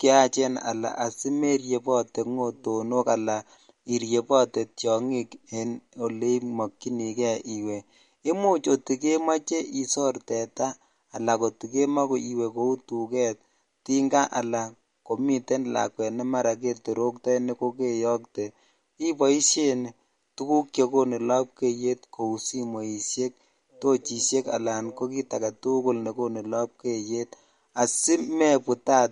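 MP3 compression is likely behind the plainly audible damage across the whole speech clip. The treble stops dead at 11.2 kHz, which fits a low bitrate of around 48 kbps. Weak frequency lines flicker between frames, leaving a watery swirl and chirpy s sounds.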